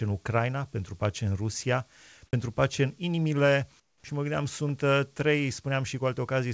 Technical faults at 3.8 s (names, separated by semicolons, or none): comfort noise in place of the background